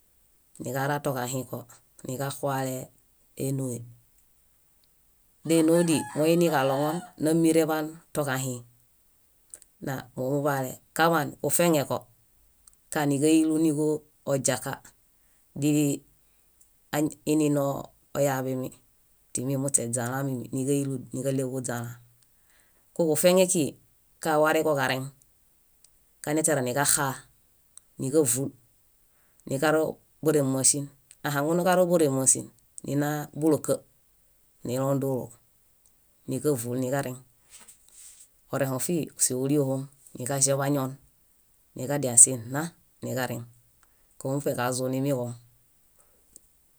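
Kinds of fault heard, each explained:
No kinds of fault are heard in this clip.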